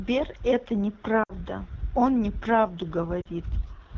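Speech runs throughout on the AMR wideband (HD Voice) codec at a rough, raspy quality that fits one of its lowest rates, around 8.85 kbit/s, where its pulse-driven vocal tract model is starved of bits. Lost AMR speech frames occur at 1.23 to 1.33 s and 3.21 to 3.28 s, consistent with radio errors wiping out a few 20 ms frames. The decoder reuses the last good pitch at falling gain, so the sound drops to near silence within two frames before the voice returns weak or rough for a moment.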